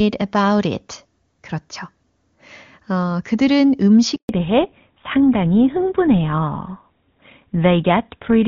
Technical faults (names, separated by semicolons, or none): handover gap; fallback to narrowband